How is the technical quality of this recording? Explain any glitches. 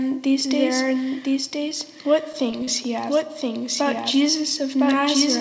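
The recording has two problems: the whole clip is doubled, and there are three brief dropouts. The band stops at 8 kHz, as expected from the G.722 call codec.

The doubled audio track runs throughout. A second, equally loud copy trails about a second behind, likely from a slower capture path. On a spectrogram, every pattern repeats, offset by roughly one second.

Short concealed packet loss occurs at 1.69–1.72 s, 2.51–2.54 s and 2.64–2.69 s. The receiver extended the preceding sound to cover each missing stretch, so you hear brief smears, visible as short, blurred, over-smooth patches.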